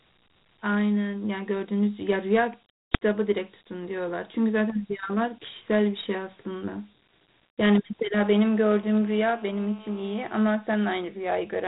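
Dialogic VOX ADPCM runs through the whole speech clip. This 4-bit adaptive coding, meant for phone menus and voicemail, stores only a coarse difference between successive samples, so its quantisation error rides along as a gritty hiss that tracks the speech and fades in the gaps. Nothing survives above 3.8 kHz, giving the narrow telephone band, and the plainly audible damage fits a 32 kbps stream.

An uninitialised buffer bursts out at 2.94 s. For about 5.33 ms, a length that fits a 256-sample block, the playback path sent a block to the output before any audio had been written into it, so whatever stale values sat in that memory were played as sound. It comes across as a brief, loud, harsh crack of digital noise, wholly unrelated to the surrounding speech.

GSM phone buzz arrives from 8.17 s to 10.41 s. A nearby 2G handset on a call transmits in radio bursts 216.7 times a second, and the audio circuitry rectifies those pulses into the signal. 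The result is a hard, rasping buzz at that rate, thick with harmonics, sitting about 22 dB below the speech. Because the phone is on a call, the buzz holds nearly steady.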